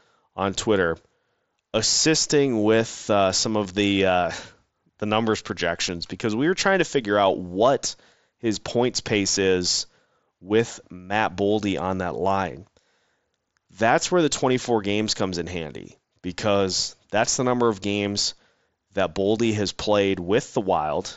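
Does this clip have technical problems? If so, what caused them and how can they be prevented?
Yes. There are two brief concealed Bluetooth headset packet loss events, at 3.65 s and 9.92 s. Each gap is about 7.5 ms, which fits a single lost packet on the link between headset and phone. The receiver filled each hole by repeating a well-matched slice of the preceding waveform, so the patches are nearly hidden. The mSBC wideband codec carrying the speech passes up to 8 kHz with only light grain. To prevent this, keep the headset close to the phone and away from interference such as Wi-Fi.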